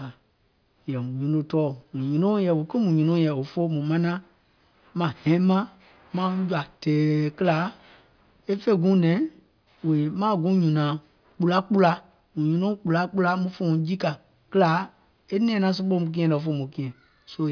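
A speech recording with nothing technically wrong with it.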